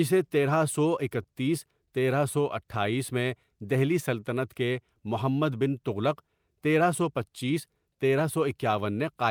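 Clock drift between sender and receiver runs through the whole speech clip. The sender's clock is about 2% slow. The receiver's buffer keeps running low, so it must stretch the audio to keep playing without gaps.

Repeated timing corrections are heard from 0.15 s to 8.93 s. The receiver repeats short pieces, unevenly spaced, to cover the shortfall. Playback runs at 98% speed. The edits add about 150 ms in total. They come across as faint hiccups and a slightly dragging tempo.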